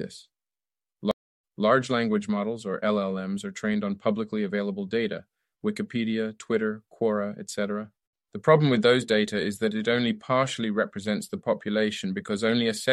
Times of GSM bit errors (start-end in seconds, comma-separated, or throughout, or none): none